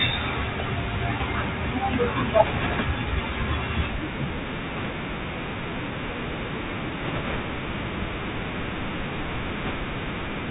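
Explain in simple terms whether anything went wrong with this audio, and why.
The whole recording passed through a Bluetooth CVSD headset codec, the narrowband link headsets use for calls. It keeps nothing above 4 kHz, so speech sounds thin and muffled. S sounds come out scratchy, and a grainy hiss sits underneath throughout.

Bit errors on the Bluetooth voice link appear at 2.43–2.84, 4.76–4.91, 7.04–7.41 and 9.63–9.71 seconds. A few percent of the transmitted bits were flipped, which adds bursts of rushing, crackly noise rather than sharp clicks, because each wrong bit nudges the sound only slightly.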